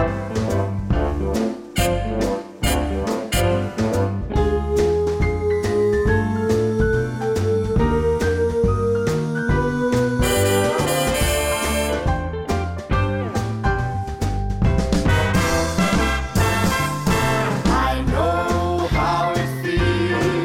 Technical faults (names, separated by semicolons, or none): none